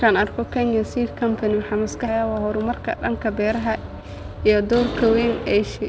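At 2.08 to 2.10 s the speech jumps forward with no gap, dropping about a second of audio. This skip ahead happened because a stretch was dropped while later audio was already waiting. From 2.11 to 4.72 s the speech then sounds hurried but keeps its pitch, running at 115 % speed. This jitter buffer speed-up trims pitch periods repeatedly, removing about 0.4 s in all, to cut the excess delay. Throughout, the call path's codec leaves nothing above 8 kHz.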